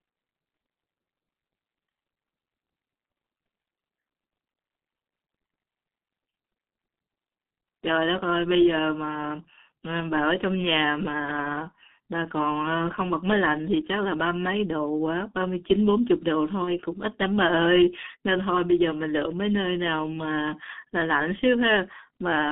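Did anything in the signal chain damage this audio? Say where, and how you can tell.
Yes. The G.723.1 codec stage damages the whole clip: the speech is band-limited to roughly 150 Hz–3.6 kHz, sounding muffled and hoarse with smeared consonants. A spectrogram shows nothing above 3.6 kHz and blurry formants, which fits a heavily coded stream near 6 kbit/s.

On the network side, VoIP packet loss concealed by the speech codec occurs from 16.64 to 16.76 s. The decoder stretches its last pitch and filter into a fading sound, consistent with a single lost 30 ms frame, and the voice stays weak or distorted for tens of milliseconds or more afterwards. On a waveform this appears as a decaying patch.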